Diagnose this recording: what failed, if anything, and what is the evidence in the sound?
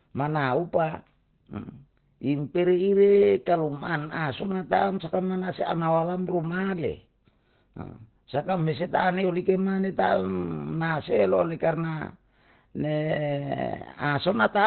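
Opus compression, likely the cause, is audible throughout the speech at the codec stage. Nothing sounds above about 4 kHz, and the voice is muffled, hoarse and heavily degraded. This fits Opus dropping to its narrowband SILK speech mode at a very low bitrate, around 12 kbps.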